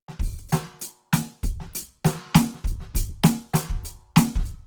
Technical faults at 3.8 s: Opus compression

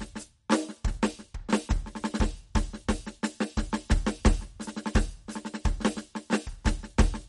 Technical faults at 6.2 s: MP3 compression

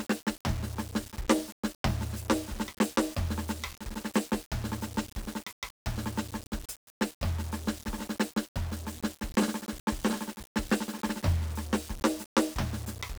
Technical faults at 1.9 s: low bit depth without dither

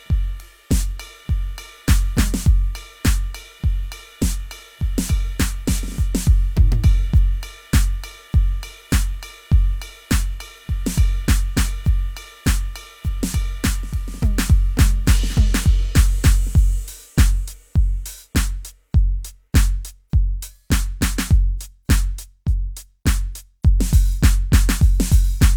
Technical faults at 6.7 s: none

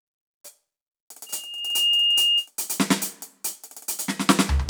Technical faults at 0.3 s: none

